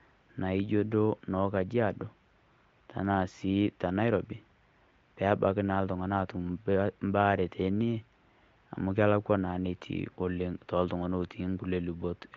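Nothing's wrong with this speech clip; it's carried over the AMR wideband (HD Voice) codec at 23.05 kbit/s, which is why the sound tops out around 7 kHz.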